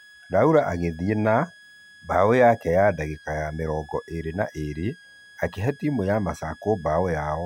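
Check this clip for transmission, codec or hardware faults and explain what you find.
Two faults are audible: a steady high whistle under the whole recording and one brief burst of corrupted sound near the start.

A thin, high whistle sits beneath the speech from beginning to end, roughly 25 dB below it. Its pitch wanders within a narrow band from 1.64 to 1.70 kHz rather than holding still. This is switching supply whistle. A switching power supply is cycling at an audible rate, either running in burst mode or beating against another converter. Its drifting frequency follows the changing load on the supply.

From 0.90 to 0.93 s a short blip interrupts the speech. This is damaged data in a compressed stream. Part of the encoded stream at that point was lost, zeroed or overwritten. The decoder misinterpreted or discarded the affected frames, lost synchronisation, and skipped ahead to find the next valid frame header.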